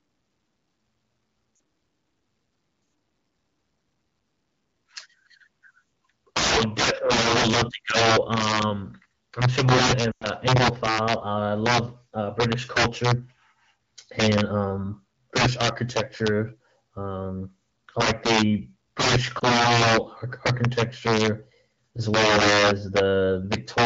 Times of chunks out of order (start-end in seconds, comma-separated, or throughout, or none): none